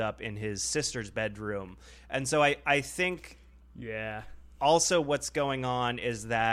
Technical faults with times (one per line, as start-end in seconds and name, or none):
0.83 dropped samples